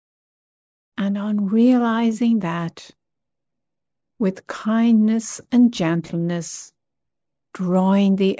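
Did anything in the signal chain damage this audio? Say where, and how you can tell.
No, nothing damaged this audio.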